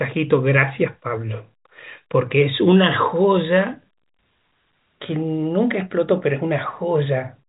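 Listening to this speech recording, nothing stood out as a technical problem, and the telephone-style G.711 coding simply keeps the sound below 3.8 kHz as that format is meant to.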